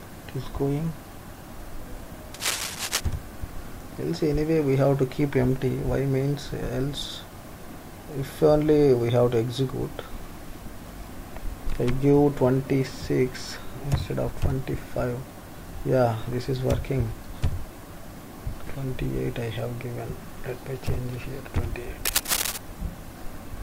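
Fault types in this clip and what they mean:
Cable scratch noise: a burst of dense, irregular crackle and rustle laid over the sound, from 2.34 to 3.01 s and again from 22.05 to 22.58 s. The first sits a little below the programme level; the second is roughly as loud as the sound itself. The likely cause is a worn cable, connector or control being moved, so its contact resistance jumps about rapidly and injects that uneven noise for the duration of the movement.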